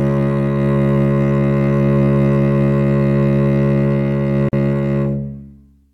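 At 4.49 s the music breaks off into a silence of about 44 ms, ending at 4.53 s. This is a gap at a join of encoded pieces: separately encoded segments were joined without trimming the encoder's start-up delay and end padding, so that padding remains as dead air. Its edges are smeared by the codec. Unlike a packet dropout, nothing is skipped; the music resumes exactly where it stopped.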